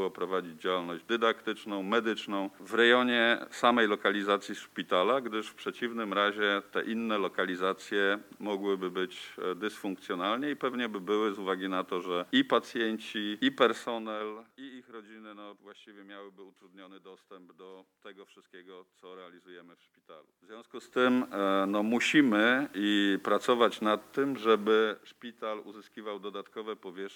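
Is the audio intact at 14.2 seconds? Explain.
No. Zipper noise runs from 13.71 to 14.60 s: a cut of roughly 25 dB stepped about 100 times a second, each step clicking, unlike a smooth fade.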